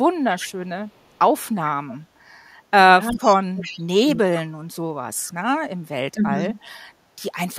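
Right at the start, from 0.34 to 0.52 s, there's an echo leak: a delayed copy of the speech, trailing it by 371 ms, at maybe 15 dB below the talker. The far end is likely on a loudspeaker, and its echo canceller didn't scrub everything its mic picked up. A much fainter scrap of the same echo follows at 0.94 to 1.19 s. From 3.11 to 3.78 s the echo comes back strong, and over the same stretch, 3.11 to 4.03 s, you get speech suppressed in double talk. The talker's level gets pulled down hard, by something like 30 dB at the deepest point, and the dips add up to well over half a second. That's likely the canceller failing to separate near speech from loudspeaker echo while both are active, and ducking both. There's a brief, quiet echo blip at 5.28 to 5.33 s. Then at 6.13 to 6.35 s there's a shorter suppression, roughly 20 dB deep and only about a tenth of a second in total. Right after it, from 6.35 to 6.71 s, a low-level echo tail follows, still at that 371 ms lag.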